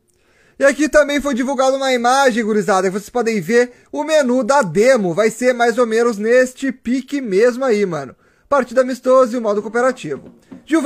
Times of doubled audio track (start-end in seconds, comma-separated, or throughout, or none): none